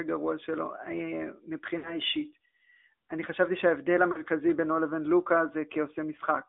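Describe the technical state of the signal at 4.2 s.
At 4.2 s the signal is coming out of a burst of lost AMR speech frames, spanning 4.12 to 4.22 s. The decoder bridged the missing data by repeating the last good pitch and vocal-tract settings at falling gain, so the sound smears and sags rather than dropping to hard digital silence or clicking as a plain packet gap would. The missing stretch fits two 20 ms frames.

Underneath, the whole line runs through the AMR narrowband mobile codec, confined to roughly 200 Hz to 3.6 kHz. Its coding damage is plainly audible even though it runs at 10.2 kbps, one of the higher modes, unlike the smoother, duller sound of an ordinary telephone band-limit.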